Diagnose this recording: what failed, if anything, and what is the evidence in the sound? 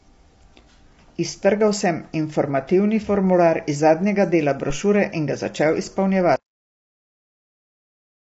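Throughout the speech the voice has a rough, grainy texture, with noise filling the gaps between harmonics and nothing above 7.7 kHz. The damage is plainly audible. This points to the codec stage, likely low-delay AAC compression of the AAC-ELD kind used in video calls. Its short frames resolve pitch harmonics poorly and spend bits inefficiently, and at a rate that sounds like about 24 kbps the coder fills the harmonic gaps with noise and drops the top band.

At 6.36 s, right after "in ga začel", the audio stops dead in the middle of the sound and falls to digital silence, with no decay. The silence lasts to the end of the file. This is a cut-off end, a storage or buffer-stage failure. The final buffers were never written or played out, so instead of fading, the signal is truncated at that sample and only empty space follows.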